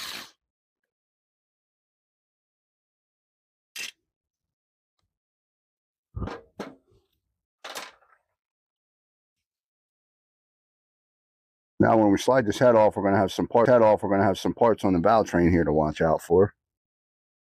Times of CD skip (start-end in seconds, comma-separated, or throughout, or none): 13.65